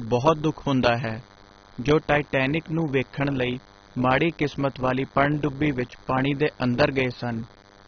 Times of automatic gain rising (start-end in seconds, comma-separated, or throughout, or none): none